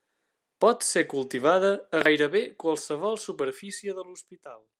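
No technical faults are audible.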